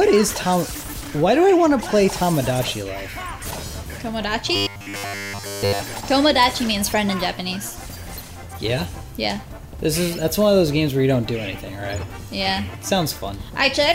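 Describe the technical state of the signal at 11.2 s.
At 11.2 s the signal is intact, with no audible fault at that point.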